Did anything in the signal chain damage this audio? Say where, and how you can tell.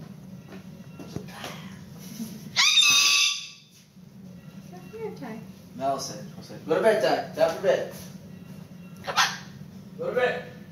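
Yes. Throughout the clip the gain ducks by around 10 dB under each loud sound, leaving the dynamics squashed. This is gain pumping, likely from input gain set far too high, with a fast limiter or compressor clamping down on each peak.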